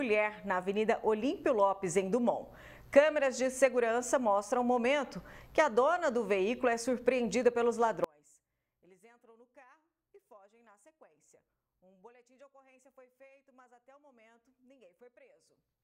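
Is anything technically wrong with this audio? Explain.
Yes. From about 8.04 s right through to the end, the sound collapses to roughly 31 dB quieter, leaving only a faint residue. That's the signature of one channel inverted, likely a polarity flip on one side of the stereo pair. Once summed to mono, everything the two channels share cancels, so the centred body all but disappears and only the small difference between left and right survives.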